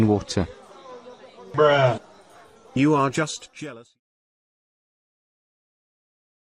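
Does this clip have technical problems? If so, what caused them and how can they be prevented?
No, this clip has no technical problems, and the smooth fade-out from around 2.5 s to 4.01 s is an ordinary edit, so there is nothing to prevent.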